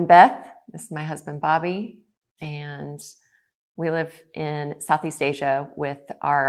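At 1.41–1.43 s, 2.43–2.45 s and 4.87–4.89 s the speech briefly turns rough and grainy, each time a lost packet rebuilt from error correction: a 20 ms stretch, which fits one dropped packet, replaced by its low-bitrate copy. The waveform shows no gap, but a spectrogram shows a short, noisier, smeared slice.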